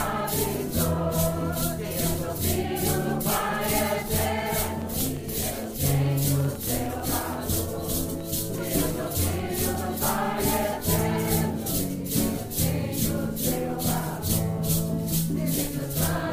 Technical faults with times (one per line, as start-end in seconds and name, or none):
3.83-9.76 train of clicks